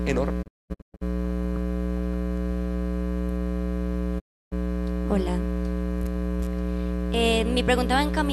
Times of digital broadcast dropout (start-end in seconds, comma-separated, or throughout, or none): 0.41-1.03, 4.18-4.53